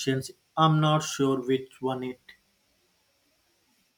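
No technical faults are audible.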